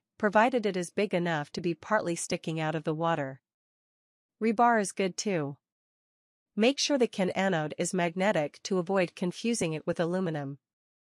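No technical faults can be heard anywhere in this audio.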